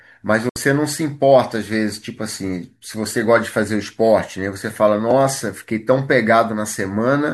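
At 0.49 s, a digital broadcast dropout: the receiver muted on failed frames, and the speech fades within 3 ms to silence until 0.56 s.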